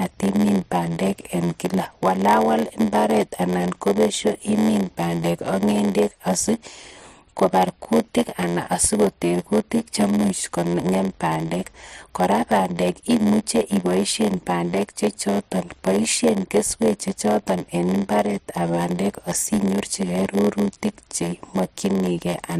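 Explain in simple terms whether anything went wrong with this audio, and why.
A steady buzz runs under the speech from start to finish, about 86 times per second, and everything plays slightly slow, at roughly 94% of normal speed. This is a block size mismatch (padded): one stage hands over chunks of audio a little shorter than the next stage expects, which fits a 512-sample read, and the leftover space is filled with silence. Those tiny silent gaps create the buzz and stretch the timing. Unlike ordinary slow playback, the pitch stays about normal.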